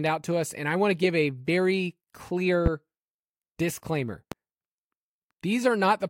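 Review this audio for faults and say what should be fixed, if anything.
Two loud pops sit on the speech, from 2.66 to 2.69 s and from 4.32 to 4.35 s, peaking about 15 dB and about 10 dB above the signal. Each is a single sharp transient, likely a voltage step from a connector, switch or static discharge, with the speech continuing underneath. Secure the connections, ground the equipment properly and avoid switching anything in the chain while recording.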